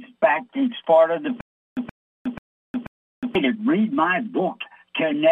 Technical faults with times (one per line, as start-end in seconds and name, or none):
1.41-3.35 stutter with silent gaps